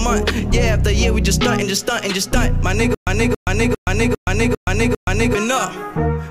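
The playback likely stalled at 2.95 s and replayed its last fragment on each retry, giving a stutter with silent gaps until 5.35 s: a 276 ms burst repeats six times, each followed by about 125 ms of digital silence, every 401 ms.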